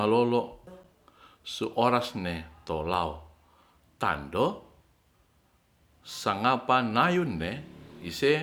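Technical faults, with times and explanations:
Nothing stood out on listening to this speech recording.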